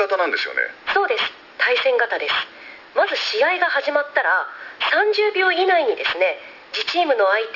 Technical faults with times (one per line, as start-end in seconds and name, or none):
0.00-7.55 aliasing